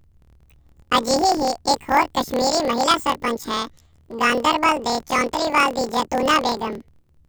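Speech with a planar-as-interleaved fault throughout. Planar blocks of about 26 ms are read as interleaved pairs. Each replays twice at double speed, an octave up, with a 38.3 Hz robotic buzz.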